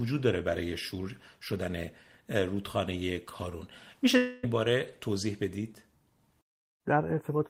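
Speech, with a long network dropout from about 4.17 to 4.45 s. Instead of going quiet, the last sound is stretched into a fading buzz or hiss lasting roughly a quarter of a second, with no true silence. When the speech resumes, about 260 ms has been skipped rather than delayed. That combination of synthetic fill and lost material sets it apart from a simple mute or a brief packet glitch, and a stalled network stream is the likely cause.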